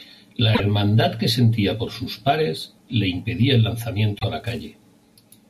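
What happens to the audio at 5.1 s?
At 5.1 s the filter is restarted on every block, from 4.40 s (just after "a la") to the end. Each block starts from silence with a small transient, giving a 200 Hz buzz that tracks level: evenly spaced 5 ms ticks on the waveform, and stacked 200 Hz harmonic lines on a spectrogram.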